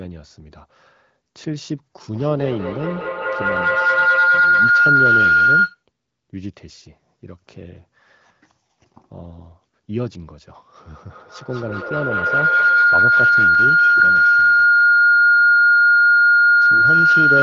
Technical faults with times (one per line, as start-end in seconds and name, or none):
2.09-5.83 feedback howl
11.10-17.43 feedback howl